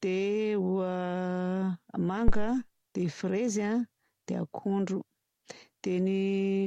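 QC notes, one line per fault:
2.28–2.56 s, phantom power thump: a deep, low-frequency thump cuts into the speech, peaking at about -11 dBFS and falling away within roughly 62 ms, with the event over by 2.56 s. A supply was switched on or off while the input was live. The sudden DC step passed through the coupling capacitors and emerged as a single low-frequency transient rather than a click.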